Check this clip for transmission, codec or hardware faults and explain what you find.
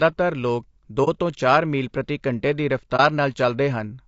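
There are two problems here: coding damage across the whole clip, and a couple of brief dropouts.

Low-delay AAC compression runs the whole way through. The speech sounds rough and grainy, with noise filling the gaps between harmonics and a thin, synthetic top end. That's likely AAC-ELD's short frames starved of bits, fitting something around 32 kbps.

AAC frame loss with muting shows up at 1.04 to 1.08 s and again at 2.96 to 3.00 s. Each gap is consistent with a single lost frame that the decoder zeroed. The overlapping windows fade the sound out and back in, so you hear brief dips.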